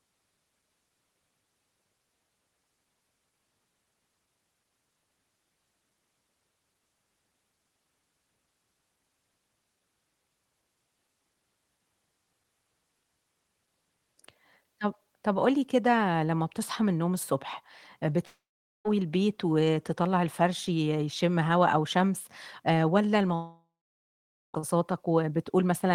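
A speech clip over a call path, with two gaps where the sound smears into a fading buzz and then drops to silence, at 18.25–18.88 s (about 0.45 s silent) and 23.35–24.57 s (about 0.86 s silent), likely long network dropouts. On a spectrogram each shows a decaying smear followed by a blank band. The spectrum stops near 12 kHz, which fits a low-bitrate Opus call path.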